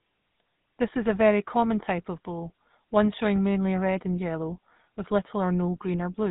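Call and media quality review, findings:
GSM full-rate codec throughout the speech: buzzy, gravelly roughness, nothing above 3.8 kHz. Pulse-driven vocal-tract model, sounds like 13 kbps full-rate coding. Plainly audible damage.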